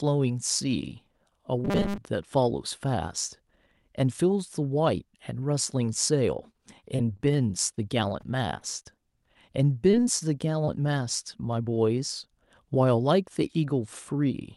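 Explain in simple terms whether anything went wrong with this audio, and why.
Robotic sound from repeated short buffers, 1.65 to 1.99 s: the voice turns into a stiff, metallic buzz at about 200 Hz. The likely cause is the software running short of fresh audio and replaying the same 5 ms scrap over and over, so most of that stretch is repeats rather than real speech.

Repeated packet loss (robotic sound), 6.53 to 7.21 s and 8.21 to 9.37 s: in each stretch, six small pieces of the call, none longer than about 22 ms, arrived too late or not at all. The receiver patched every hole by stretching the last sound, leaving choppy, robotic speech with bits missing.

Short concealed packet loss at 7.75 to 7.79 s, 9.91 to 9.95 s, 10.19 to 10.23 s and 10.65 to 10.69 s: each time, about 20 ms of audio went missing. The receiver briefly continued the previous sound to cover it, which causes a tiny smear or wobble.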